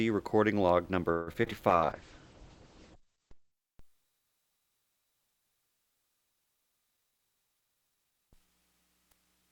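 From 1.11 to 1.53 s the sound turns choppy, with six short holes that tear it apart, the longest about 155 ms. This is repeated packet loss: missing packets were patched by stretching the last sound, covering roughly half that span.

Between 1.70 and 3.59 s the audio goes rough and muffled, losing everything above 8 kHz for about 1.76 s. That points to a call bitrate drop from around 96 kbps to roughly 9 kbps, forcing the encoder into coarse, band-limited coding.

Inside that stretch, from 2.96 to 3.20 s, the sound drags at unchanged pitch, running at 88% speed and gaining 36 ms. This is a jitter buffer slow-down, with the receiver repeating tiny slices of audio to rebuild its reserve.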